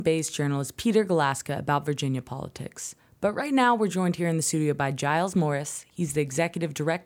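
No technical faults can be heard anywhere in the speech recording; the signal stays continuous and stable throughout.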